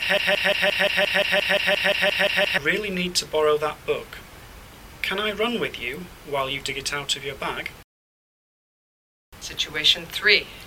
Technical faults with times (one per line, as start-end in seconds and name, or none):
0.00-2.58 broken-record loop